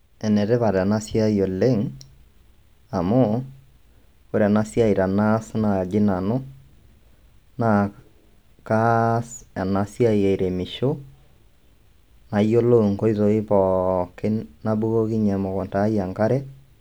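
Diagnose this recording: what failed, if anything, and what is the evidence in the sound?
Nothing failed in this recording.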